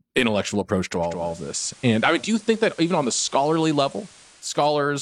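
Digital radio blending to analogue runs from 0.97 s, just after "intellectual approach to", until 4.68 s. The receiver lost its digital stream and cross-faded over about 460 ms to the FM broadcast. Hiss comes up, roughly 25 dB down, with no level change.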